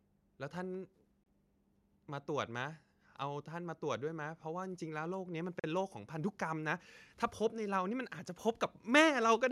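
Bluetooth stalls at 1.23 to 1.26 s and 5.60 to 5.64 s cut the speech to silence for 28 ms and then 42 ms. Each gap is likely a stall where delayed packets let the headphones' buffer empty and playback halted until retransmissions arrived.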